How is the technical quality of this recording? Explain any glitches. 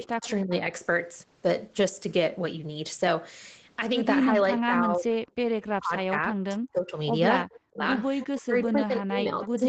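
The recording has two recurring call glitches: the talker's speech is pushed down in several places, and a faint delayed copy of it returns twice. The audio is band-limited to 8 kHz, which fits the call's microphone processing and an Opus codec at a fairly low bitrate.

Speech suppressed in double talk happens four times: 0.12–0.71 s, 5.76–6.98 s, 7.47–7.82 s, and 8.34 s to the end. The speech dips sharply or cuts out in pieces. The first dip is about 25 dB at its deepest, the middle two reach about 40 dB, and the last about 30 dB. The stretch at 5.76–6.98 s loses roughly a second of speech. The likely cause is both sides speaking at once, so the echo canceller could not tell this talker from the loudspeaker echo and attenuated everything.

Echo leak appears twice, briefly: 0.22–0.29 s and 7.53–7.59 s. A faint copy of the speech arrives 318 ms late, about 20 dB below the speech the first time and about 25 dB below it the second time. 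It likely comes from the far end playing the call on a loudspeaker, where that device's echo canceller failed to remove all of what its microphone picked up and sent the residue back.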